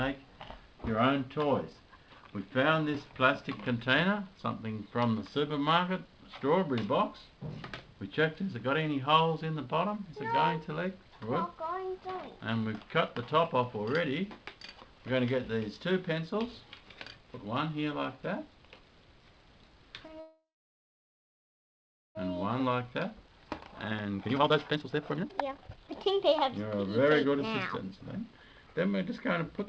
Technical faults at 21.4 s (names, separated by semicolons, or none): call audio freeze